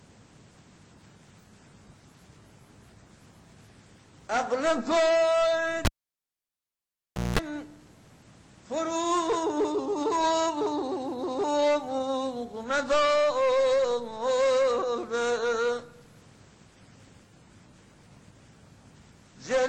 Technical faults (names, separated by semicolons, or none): cable pulled and plugged in